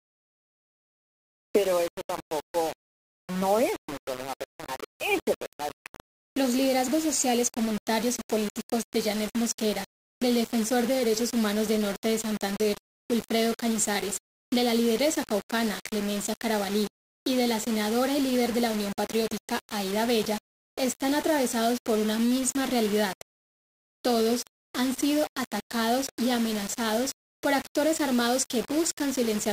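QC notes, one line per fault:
Throughout, low bit depth without dither: every sound carries a coarse, gritty distortion that moves with the level. Quiet passages sputter or drop out between steps. The error sits only about 15 dB below the signal, which fits likely undithered rounding to roughly 4 bits.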